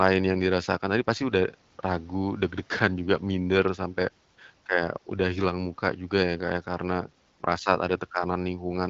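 No faults can be heard in this speech, which comes through an AMR wideband (HD Voice) path at 12.65 kbit/s with only the light coding character expected at that rate and no content above about 7.6 kHz.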